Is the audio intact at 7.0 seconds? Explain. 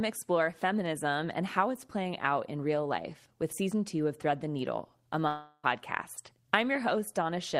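Yes, the audio is intact at 7.0 seconds, with no audible fault at that moment.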